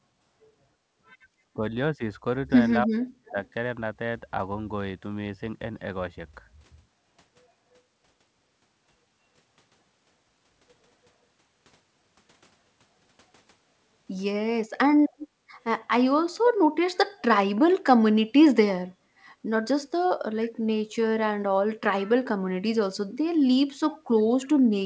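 Speech recorded through a wideband call, with nothing above 8 kHz. Speech suppressed in double talk cuts the voice at 1.45–1.63 s (about 25 dB), 1.97–2.01 s (about 10 dB) and 2.86–3.36 s (about 40 dB), likely the echo canceller ducking both talkers. Echo leak adds a faint copy delayed by 309 ms at 15.09–15.28 s (about 15 dB down), 20.43–20.50 s and 23.93–23.98 s (about 25 dB down), likely from residual loudspeaker pickup.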